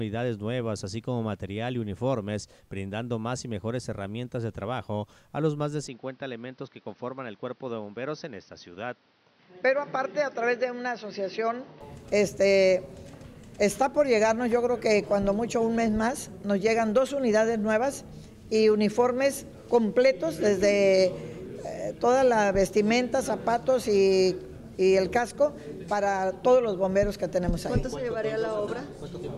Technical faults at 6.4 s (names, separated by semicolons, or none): input switched to a poorer device